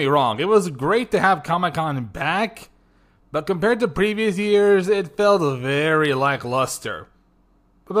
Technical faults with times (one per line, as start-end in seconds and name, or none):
none